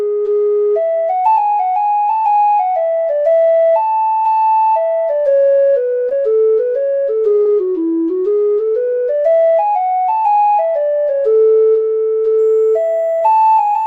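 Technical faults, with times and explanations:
6.09 to 6.13 s, 7.43 to 7.47 s and 13.19 to 13.23 s: short concealed packet loss. Each time about 20 ms never arrived, so the receiver extended the preceding sound, leaving a brief smear or wobble.
12.39 s to the end: switching supply whistle. A power supply's switching falls into the audible range, adding a very faint, slightly drifting whistle between 7.15 and 7.39 kHz.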